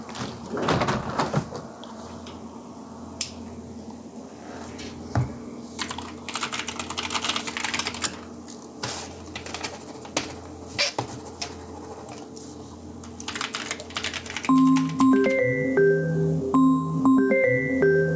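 Gain pumping runs throughout: the level ducks by around 10 dB under each loud sound, likely from an overdriven fast limiter, within a call-band signal stopping at 8 kHz.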